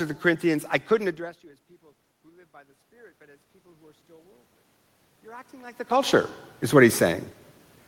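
Speech clip with automatic gain rising twice: after the input falls about 15 dB, gain climbs about 8 dB from 2.22 to 4.55 s, then about 4 dB from 5.23 to 7.01 s, swelling voice and room noise together.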